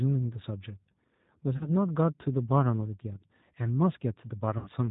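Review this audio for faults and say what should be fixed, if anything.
Throughout, the speech carries G.729 codec damage: nothing above 4 kHz, a rough, slightly synthetic texture from pulse-based excitation, consistent with an 8 kbit/s narrowband VoIP link. Unlike a plain low-pass filter, the voice itself sounds rebuilt, not just dulled. A wideband codec such as G.722 or Opus would prevent this.

VoIP packet loss concealed by the speech codec appears at 1.57–1.70 s and 4.58–4.69 s, covering about 40 ms and 80 ms of missing audio, which fits two and four 20 ms packets. The decoder stretches the last pitch into a fading buzzy tone or coloured noise, and the voice stays weak or distorted briefly after packets resume. A hard dropout would leave silence or a click instead. Jitter buffering, forward error correction or a more reliable network path would prevent it.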